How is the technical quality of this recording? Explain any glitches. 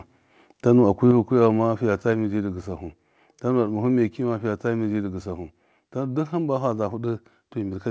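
The recording has one clear glitch. It arrives through a call path that carries nothing above 8 kHz, which fits a wideband codec such as G.722.

At 1.11 s the level of the speech and the background drops together in a single instant step of about 5 dB and stays down. This is a microphone volume stepped down, most likely by the call software lowering the input gain. Unlike compressor pumping, the level never recovers afterwards.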